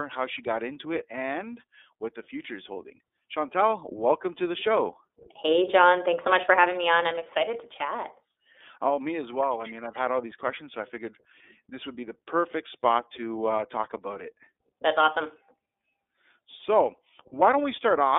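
iLBC codec coding runs through the whole clip, from start to finish. The speech is confined to a telephone line band of 300 Hz to 3.6 kHz, so the low body and all the upper air are gone. Each 30 ms frame is coded on its own, without borrowing from the one before, and at a rate that fits the 13.33 kbps mode the codec damage is plainly audible: the speech takes on a rough, synthetic edge.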